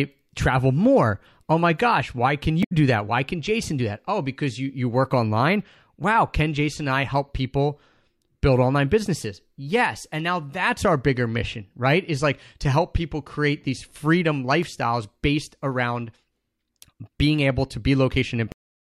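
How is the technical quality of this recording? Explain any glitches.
Two glitches stand out in the speech. From 2.60 to 2.72 s there is a brief corrupted burst lasting about 0.12 s. This is damaged data in a compressed stream. Corrupted bytes made the decoder misread those frames, lose sync and hunt for the next valid frame header.

At 18.52 s the sound stops abruptly mid-utterance and drops straight to digital silence with no natural decay. This is a cut-off end: the final buffers were never written out, so the recording simply ends there.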